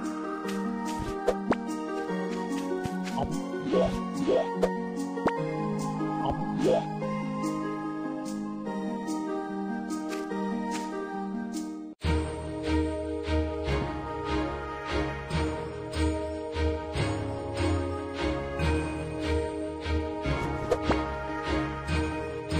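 A loud pop at 2.86 to 2.88 s stands well above the sound, and a double pop follows at 13.69 to 13.84 s, somewhat less prominent. Each is likely a voltage pulse from a plug, switch or static, with the sound continuing underneath.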